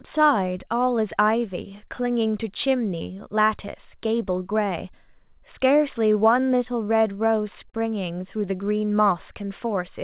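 Throughout the speech, clock drift between sender and receiver is at work: the sender's clock runs roughly 3 percent slow, so the receiver's jitter buffer keeps draining and has to be topped up. Unlike a single network glitch, this shows up as a steady, one-directional pull on timing across the whole clip rather than as an isolated event. Everything sits inside the call path's narrow band, with nothing above 4 kHz, which fits G.711 mu-law at 64 kbps.

The drift is handled by repeated timing corrections running from 0.01 s to 9.89 s. The receiver repeatedly stretches short pieces, playing the speech at about 98 percent speed and adding around 300 ms in total. Every edit goes the same way, lengthening and never shortening, and they are unevenly spaced. The result is a slightly sluggish tempo, not the audible holes that packet loss would leave.

At 7.70 to 7.76 s comes a short stall from a late packet. 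The buffer ran empty, and the receiver held the last sound for 35 ms until the data arrived, then resumed at the same point. Nothing is lost, and the delay grows by 35 ms. It is heard as one brief sustain, distinct from the gradual stretching around it.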